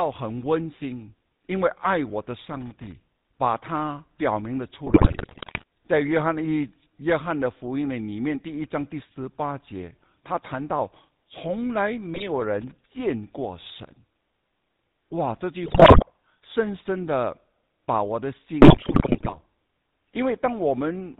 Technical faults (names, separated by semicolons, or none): GSM full-rate codec; loose connector crackle; GSM bit errors